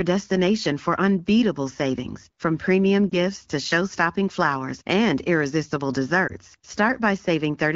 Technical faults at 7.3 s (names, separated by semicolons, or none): none